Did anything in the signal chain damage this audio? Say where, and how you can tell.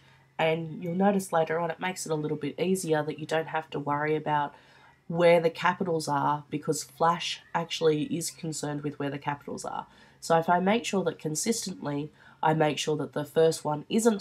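Yes. From 9.36 s to the end, regular ticks at 25 Hz ride on the sound, a resampler restarted on every block during 48 kHz to 44.1 kHz conversion. Each 40 ms block was converted without its neighbours' samples, leaving an error at every block edge.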